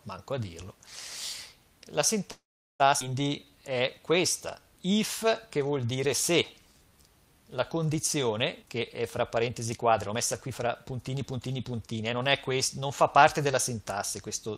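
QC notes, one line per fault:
2.31–2.82 s, call audio freeze: packets likely stalled in transit and the jitter buffer ran dry, so the receiver stretched the last sound into a brief fading buzz or hiss that decays to near silence for about 0.41 s. Playback then resumes where it stopped, inserting a gap of roughly half a second with nothing lost.
3.00 s, skip ahead: a stretch of audio was discarded while newer audio was already queued, so playback jumps forward almost seamlessly. Around a third of a second of sound is missing, and the material on either side is butted together with only a tiny join.
3.45–4.13 s and 4.59–7.03 s, jitter buffer slow-down: the buffer was short of reserve, so the receiver repeated individual pitch periods and bits of pauses over and over to rebuild it. The sound plays at 89% and then 91% speed with pitch unchanged, adding 82 ms and 221 ms, so sounds are drawn out.
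8.62–12.21 s, jitter buffer speed-up: the buffer held more audio than its target, so the receiver cut short pitch-period-sized pieces repeatedly to shed the excess delay. The sound runs at 113% speed with pitch held, losing about half a second in total and coming across as hurried.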